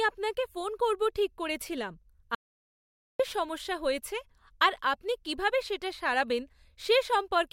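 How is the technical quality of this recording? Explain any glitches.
The recording has one clear glitch: an audio dropout to silence. From 2.35 s to 3.20 s the speech cuts off mid-flow. About 0.85 s of sound is simply gone. The gap is silent, with no room tone underneath. The speech then resumes abruptly. The likely cause is a brief loss of the input signal, such as a loose connection or a momentary mute, while the recorder kept writing zeros.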